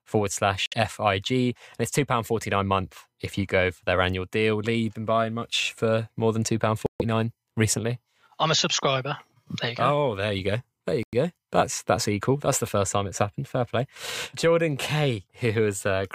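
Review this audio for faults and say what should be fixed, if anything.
The speech drops to dead silence three times, about 59 ms at 0.66 s, 137 ms at 6.86 s and 98 ms at 11.03 s, then resumes. This is likely a Bluetooth stall, where interference delayed packets until the headphone buffer emptied. To prevent it, reduce wireless interference and distance, or use a wired connection.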